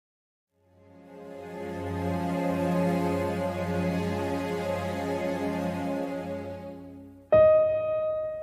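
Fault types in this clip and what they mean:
No technical faults can be heard anywhere in this audio. Nothing in the signal calls for a diagnosis.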